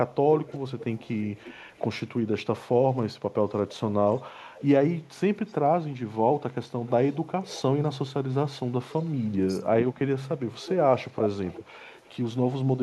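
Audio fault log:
0.14–12.78 s, echo leak: a faint delayed copy of the speech trails it by 354 to 359 ms at 0.14–2.08, 3.71–3.75, 4.57–4.67, 5.47–5.97, 6.81–7.98, 8.89–9.33 and 10.39–12.78 s, about 20 to 35 dB down. It is likely a far-end loudspeaker path that the echo canceller did not fully cancel.
9.59–10.0 s, speech suppressed in double talk: the talker's level dips by as much as about 25 dB in pieces adding up to roughly 0.3 s. This is likely an echo canceller that confused overlapping talk with echo and pulled everything down.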